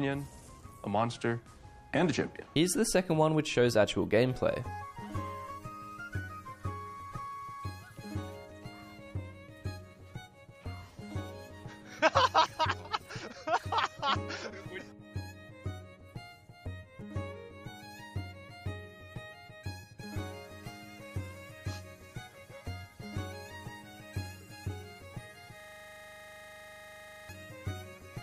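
From 25.60 s to 27.29 s a system hang loop takes over: a 40 ms slice of audio repeats exactly, 42 times, as the hardware keeps replaying one buffer. It sounds like a rattling buzz at 25 Hz. On a spectrogram it shows as evenly spaced vertical stripes, and on the waveform as identical copied blocks.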